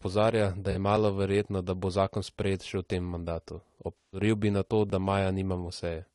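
The speech is rough and grainy from start to finish, with noise filling the gaps between pitch harmonics and a thin, synthetic-sounding top band. This fits low-delay AAC compression, likely AAC-ELD at a bitrate around 32 kbps, where short frames resolve harmonics poorly and leave too few bits. On a spectrogram the harmonic stripes look blurred and speckled, and the upper band appears patchy rather than smoothly textured.

At 0.71 to 0.76 s, a 40 ms AAC frame loss with concealment produces a brief smeared, phasey blip. A longer loss follows from 3.98 to 4.20 s, after "v tem mandatu" and before "bi na to da". Across these 160 ms the sound turns noisy and hollow, then decays and swells back in. In both gaps the decoder rebuilt the missing audio from the last good spectrum, which shows on a spectrogram as smeared, featureless energy.

At 4.90 s, just after "bi na to", there is a small jump in the sound, and no silence around it. 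A dropped buffer (overrun) is the likely cause. The program failed to collect its samples in time, and a few milliseconds of audio were overwritten and lost. The waveform shows a sudden discontinuity where the two sides join, and the spectrogram shows a thin vertical broadband line.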